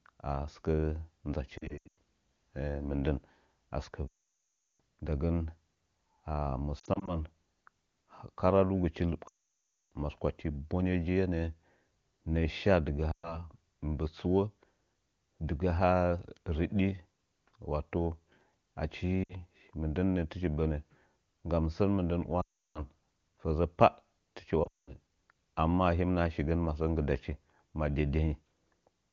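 Lost AMR speech frames occur at 1.57–1.97 s, 4.07–4.80 s, 6.79–7.16 s, 9.28–9.92 s, 13.12–13.44 s, 19.24–19.34 s, 22.41–22.83 s (after "nggam sən mɨndən", before "fəzə pah fɨchi") and 24.63–24.94 s (just after "fəzə pah fɨchi"). Radio errors corrupted frames, so the wideband decoder reused the last good pitch and vocal-tract settings at falling gain. Scattered losses near 1.6 s and 6.8 s warble briefly. The long runs at 4.07 s and 9.28 s drop to near silence within two frames.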